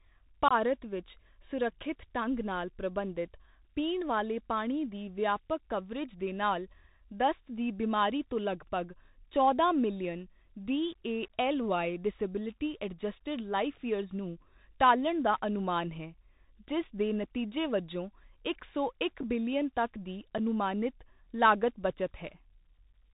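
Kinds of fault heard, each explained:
Bluetooth CVSD headset codec: the speech passed through a one-bit 64 kbps delta coder, which cuts everything above 4 kHz, roughens sibilants and leaves a granular hiss underneath.
Unconcealed Bluetooth headset packet loss: dropped packets became silence or an idle pattern, punching abrupt gaps of 22.5 ms at 0.48 s and 7.5 ms at 19.23 and 20.38 s.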